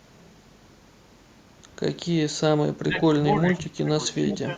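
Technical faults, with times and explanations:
2.85–2.94 s, 3.52–3.62 s, 3.82–3.94 s and 4.15–4.49 s: speech suppressed in double talk. The speech dips in level in four brief patches. The deepest drops are about 10, 15, 20 and 5 dB in turn. The third dip is the hardest. The likely cause is the echo canceller hearing the far side at the same moment. It could not tell this talker from the returning echo, so it pulled both down.
3.55–3.61 s and 4.30–4.37 s: echo leak. A faint delayed copy of the speech slips through, trailing the original by 358 ms. The first scrap sits about 25 dB below the speech. The second is louder, about 15 dB below. Both are short. This is likely a loudspeaker on the far end whose echo canceller missed part of what its microphone caught, so that remnant was sent back.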